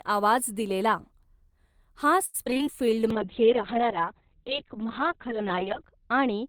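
Speech, with three separate network faults in quick succession. From 2.25 to 2.61 s there is repeated packet loss with robotic sound: six gaps, the longest 86 ms, leave about 39% of that stretch patched by stretching the previous sound forward. The result is a choppy sound with fragments missing. Unlike a single dropout, the holes recur every few tens of milliseconds, so the voice stutters rather than simply going silent once. Next, from 2.86 to 3.27 s, a jitter buffer slow-down adds about 51 ms by repeating short pitch periods, so the voice drags at roughly 89% speed while its pitch stays put. That unchanged pitch is what separates it from a tape-style slowdown, where the voice would also drop lower. There is no chopping here either, only drawn-out sounds, which sets it apart from the loss just before. Overlapping that from 3.11 s to the end at 6.48 s is a call bitrate drop. The encoder falls from 32 kbps to 6 kbps and sits at the bottom for about 2.7 s, and the audio bandwidth shrinks from 20 kHz to 4 kHz. 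The speech turns muffled and watery, losing its sibilance and air, with coarse, smeared texture. This differs from packet loss in being continuous degradation with nothing missing, and from a plain low-pass filter in the added grainy, swirling coding artefacts.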